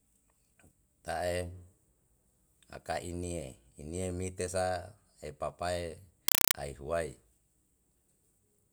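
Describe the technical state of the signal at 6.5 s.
A compressed stream played as audio runs from 6.28 to 6.54 s: an AC-3 bitstream, which fits a 192 kbps encode, is passed as raw samples without decoding. Each frame becomes a 4 ms noise burst, repeating 31.25 times a second, heard as loud chattering static replacing the speech.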